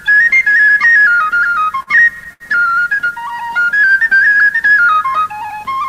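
Between 1.55 and 2.43 s the audio suffers repeated stalls (stutter): six times the jitter buffer ran dry because packets arrived late, and the receiver held the last sound for about 168 ms in total (longest pause 71 ms). Nothing is lost, but the flow halts in distinct hiccups. From 3.35 to 4.42 s a jitter buffer slow-down behaves differently. Pitch periods were repeated to add 79 ms, so the audio runs smoothly at 93% speed with the pitch unchanged. It sounds stretched rather than broken into stops.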